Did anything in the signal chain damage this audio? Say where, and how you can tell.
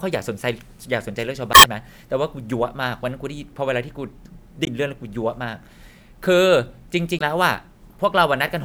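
Yes. The damage sits at the codec stage: damaged data in a compressed stream. Short bursts of garbled sound break into the speech at 1.51 to 1.65 s, 4.64 to 4.68 s and 7.17 to 7.22 s. The first lasts about 150 ms and the other two about 45 ms each. Corrupted bytes in the encoded file make the decoder misread those frames and lose sync until it finds the next valid frame header.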